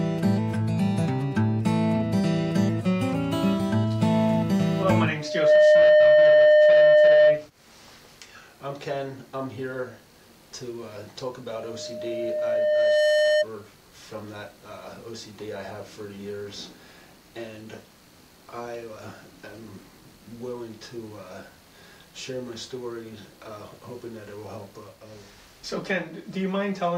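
A microphone is picking up the loudspeaker it drives, and at 607 Hz the loop gain passes one, causing loudspeaker feedback squeal. From 5.2 to 7.47 s that single tone swells almost at once into a squeal roughly 15 dB above the surrounding sound. From 11.54 to 13.47 s the same 607 Hz tone returns, building more slowly over about a second and a half and peaking around 10 dB above the sound.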